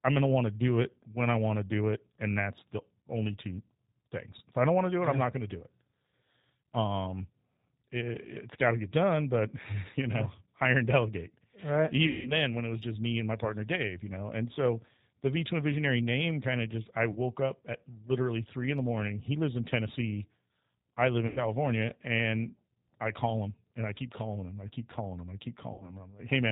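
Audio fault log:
Throughout: G.729 codec. The speech is squeezed into an 8 kbit/s coder that rebuilds each 10 ms frame from a vocal tract filter, a pitch guess and a few pulses, so nothing gets past 4 kHz, and the voice comes out noticeably rough, thin and a bit synthetic.
12.07 to 12.32 s, 17.12 s to 17.19 s, 21.27 to 21.40 s, 25.74 to 25.96 s: VoIP packet loss concealed by the speech codec. Packets drop out, about 180 ms before "then when it was", a brief 30 ms gap between "kind of just I" and "up at literally three", 90 ms after "I live", and 60 ms near the end. The decoder fills each hole by extending the last pitch and filter at falling gain, so the sound smears into a fading buzzy tone or coloured noise. Because each frame leans on the one before, the voice stays weak or distorted for tens of milliseconds or more after the gap.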